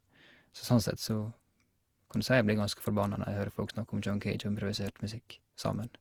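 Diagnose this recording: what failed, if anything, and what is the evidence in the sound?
Codec stage: swirly, hollow, smeared speech throughout, yet bandwidth reaches 20.4 kHz, unlike a single low-bitrate pass. This is likely generation loss from about seven Opus 64 kbit/s encodes.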